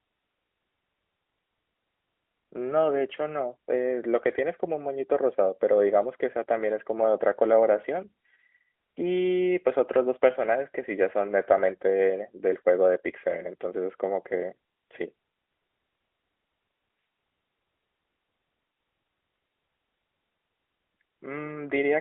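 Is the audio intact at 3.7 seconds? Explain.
Yes, the speech is intact at 3.7 seconds: no fault occurs there, and what is heard is the ordinary narrowband sound of the AMR-NB mobile codec at 12.2 kbps, confined to the telephone band of roughly 300 Hz to 3.4 kHz.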